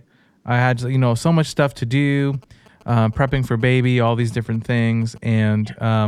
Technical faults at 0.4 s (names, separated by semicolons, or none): none